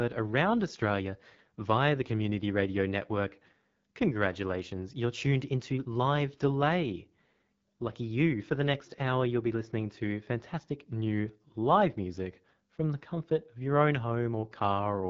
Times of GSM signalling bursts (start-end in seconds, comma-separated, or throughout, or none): none